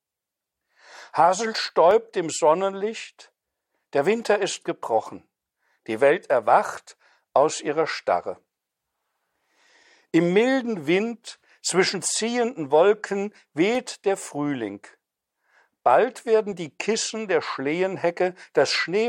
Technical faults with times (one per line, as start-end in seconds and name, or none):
1.91 dropped samples
4.20 dropped samples
13.75 dropped samples